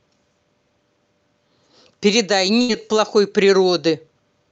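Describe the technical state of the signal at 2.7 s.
At 2.7 s the signal is inside a burst of packet loss that runs from about 2.61 to 2.71 s. About 80 ms of audio is missing, and the receiver filled a gap of roughly 73 ms by extending the last decoded sound while lowering its level. The result is a brief smeared, fading continuation rather than dead silence. That concealment tail sets it apart from a plain dropout or mute. When the speech returns it skips ahead, with the missing stretch simply gone.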